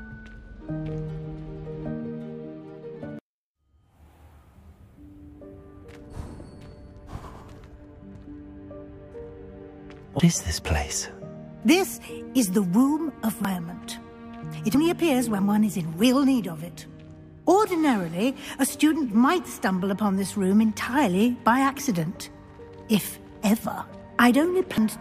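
The audio has compressed frames skipped at 8.15, 10.2, 13.45 and 24.78 s. Each jump drops roughly 100 to 300 ms, which fits missing or rejected frames of about 93 ms.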